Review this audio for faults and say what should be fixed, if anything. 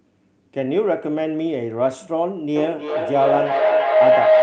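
A rising tone near 700 Hz swells from 2.56 s to the end, pulsing about every third of a second and peaking about 7 dB above the speech: feedback howl, where two devices in one room each re-amplify the other's sound. Prevent it by muting one device or keeping only one connected in the shared room.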